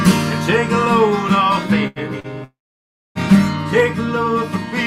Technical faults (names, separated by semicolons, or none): burst of packet loss; short concealed packet loss; long network dropout